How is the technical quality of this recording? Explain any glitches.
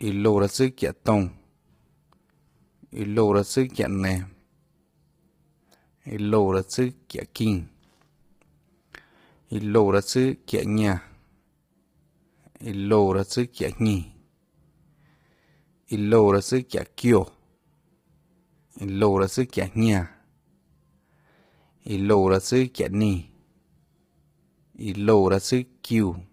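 The recording is compromised by heavy codec damage for its whole length. The voice sounds rough and grainy throughout, with hiss filling the gaps between harmonics and a thin, synthetic top band. This is likely low-delay AAC compression, AAC-ELD, at a low bitrate around 24 kbps. Its short frames of roughly 10 ms cannot separate pitch harmonics cleanly, so noise smears between them. That constant graininess, rather than pre-echo on onsets or a muffled band limit, distinguishes it from ordinary AAC or MP3.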